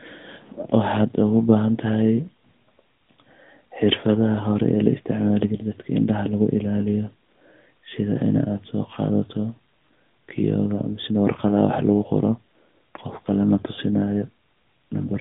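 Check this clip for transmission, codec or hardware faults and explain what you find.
One fault runs through the whole clip: AMR narrowband mobile codec. The speech is squeezed into a roughly 150 Hz to 3.6 kHz telephone band, with nothing above 3.7 kHz. Its pulse-driven vocal-tract model sounds plainly buzzy and synthetic, which fits a mid-rate mode near 10.2 kbps.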